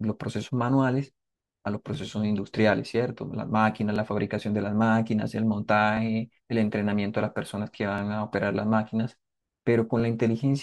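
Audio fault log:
1.94, 3.96, 5.97, 7.98 and 10.00 s, overlapping chunks: the speech is assembled from 2-second chunks, and each new chunk begins about 13 ms before the previous one ended. That sliver of audio plays twice at every join, so the waveform jumps backward briefly and resumes. Because the repeat is so short, it comes across as a click or stutter rather than an audible echo, recurring at a steady interval of just over 2 seconds.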